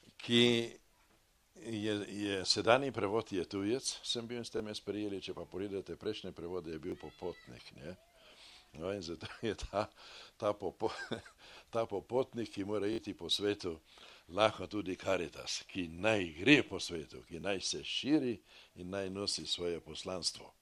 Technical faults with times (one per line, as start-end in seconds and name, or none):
4.57-4.60 repeated buffer
6.90-6.92 repeated buffer
12.93-12.98 repeated buffer
17.41-17.44 repeated buffer